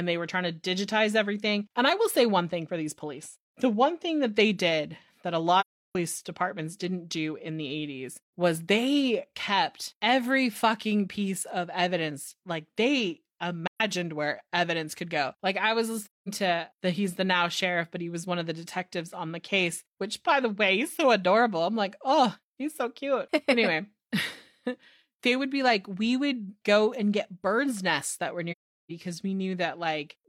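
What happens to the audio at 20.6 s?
Nothing goes wrong at 20.6 s; the speech carries on intact through that moment with no dropout, click, distortion or other fault.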